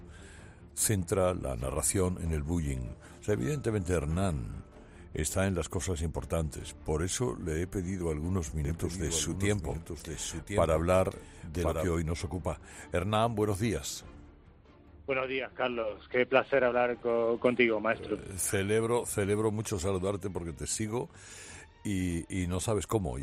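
From 8.65 to 11.85 s there is a doubled audio track. A second full-band copy of the sound runs about one second behind, a few dB quieter. It has no decay or room colour. It starts and stops abruptly. A slower second capture path is the likely cause.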